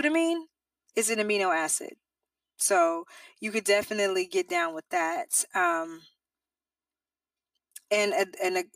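Speech runs through the whole clip with a channel delay, heard as comb filtering. One channel arrives about 3 ms behind the other. When the two are summed to mono, shared content cancels at regularly spaced frequencies. The first notch falls at roughly 150 Hz. Further notches repeat up the spectrum at roughly 300 Hz intervals. The voice sounds hollow and phasey throughout, with fixed notches that never change.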